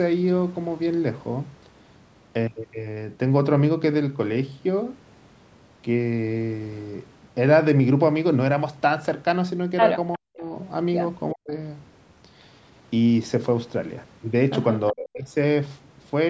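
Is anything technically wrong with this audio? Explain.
Yes, there are two echo-related faults in this speech recording.

Echo leak, 10.12 to 10.18 s: a short, faint repeat of the talker arrives about 362 ms late, roughly 25 dB below the speech. It is likely a far-end loudspeaker echo that the echo canceller failed to fully remove and sent back down the line.

Speech suppressed in double talk, at 10.16 to 10.47 s, 11.33 to 11.52 s and 14.91 to 15.25 s: the speech abruptly sinks by around 40 dB and chops out for a few tenths of a second. This likely happened because both sides spoke at once, and the echo canceller, unable to separate the talker from the echo, turned everything down together.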